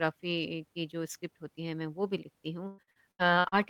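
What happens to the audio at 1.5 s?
Nothing goes wrong at 1.5 s; the speech carries on intact through that moment with no dropout, click or distortion.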